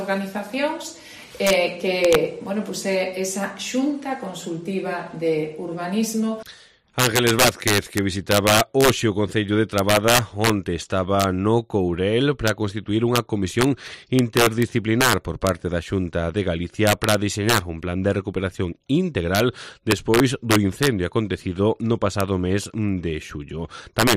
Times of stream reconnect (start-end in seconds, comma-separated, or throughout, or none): none